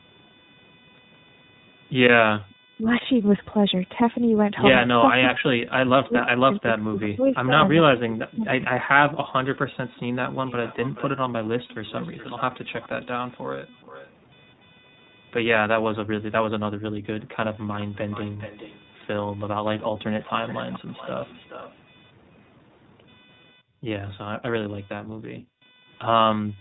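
Two faults run through the whole clip. The first is computer activity noise. A faint buzz sits around 30 dB below the speech. It pulses at roughly 500 Hz. The buzz follows the machine's load, not the talker. Processor or graphics activity shifts the shared ground, and the audio circuit picks that up. It rises and fades on its own, and it keeps going through pauses.

The second is iLBC codec damage, and it is plainly audible. Nothing above 4 kHz gets through, so the speech sounds narrowband and muffled at the top. The codec builds each 20 ms frame on its own, without drawing on the frame before. That leaves a rough, slightly synthetic grain on the speech. The damage fits iLBC's 15.2 kbps mode.

The first echo leak comes at 2.50 to 2.55 s. A delayed copy of the speech arrives about 0.43 s late. Here it is only a brief scrap, around 35 dB down. The far side was likely playing the call on a loudspeaker. 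Its echo canceller did not remove everything its microphone picked up. The leftover was sent back down the line.

Speech suppressed in double talk follows at 2.77 to 2.87 s. The speech dips by around 15 dB for about a tenth of a second. It happens again from 5.2 to 8.55 s, and it is much heavier. The speech falls by as much as 40 dB, for about 3 s in total. Both sides were likely talking at once. The canceller could not separate talker from echo, so it turned both down.

Echo leak returns from 9.97 to 14.1 s and again from 17.54 to 21.75 s. These stretches are long. The echo is only about 20 dB below the speech. The same 0.43 s delay marks it as the same leak.

Background gated by the echo canceller begins at 23.53 s. The room sound drops by about 26 dB until 23.85 s, then comes back. From 25.03 s to the end at 26.61 s it drops again, by up to 40 dB. That gap totals about one second. Each time, the loudspeaker was playing, and the canceller clamped the microphone. 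The room tone returns when the canceller lets go.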